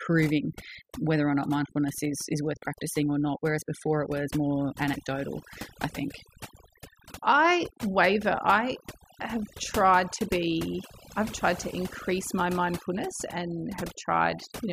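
From start to finish, the gaps between phrases fall to near silence scattered with twinkling specks, and the quieter parts of the speech seem to dissolve. That is overdone noise removal: a noise reduction process set far too strong, cutting individual frequency bands down hard whenever they came close to its noise estimate, so the background noise dropped away but the softer portions of the speech were stripped away along with it.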